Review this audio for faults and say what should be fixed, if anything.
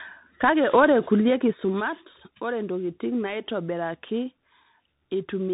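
Throughout, the speech sounds rough and noisy, with nothing above 3.8 kHz. This is tandem speech coding: the signal was decoded and re-encoded at each link, passing through CVSD, then G.711 A-law, then CVSD again, so each coder compounded the previous coder's damage. To prevent it, keep a single codec end to end, or pass the coded stream through transparently rather than transcoding at each border.

From 0.85 to 2.04 s, just before "ore ntokitin", a fine ticking or zipping rides on the sound as the level drops by about 10 dB. This is zipper noise. The gain moves in 2 dB jumps, roughly seven per second, with no smoothing, so each step leaves a small click. To prevent it, ramp gain changes per sample or with a short interpolation instead of stepping once per block.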